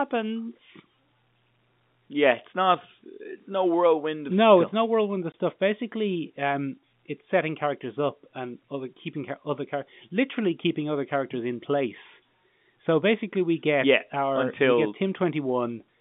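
At 5.32 s, right after "it's no whirlwind of", the speech drops out for 20 ms. This is packet loss filled with silence: a packet never arrived, and the receiver played silence in its place instead of concealing the gap. A hole of that length fits a single 20 ms packet. The cut has hard edges. The G.711 telephone coding carrying the call limits the band to roughly 150 Hz to 3.6 kHz.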